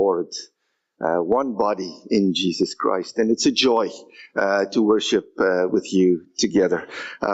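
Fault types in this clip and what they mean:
Gain pumping: the level swings by roughly 15 dB, tracking the sound moment by moment. A noise gate would cut the background to silence, and a slow level drift would not follow each loud sound. The likely cause is input gain set far too high, with a fast limiter clamping each peak, so loud and soft parts sit squashed together within the call's 8 kHz band.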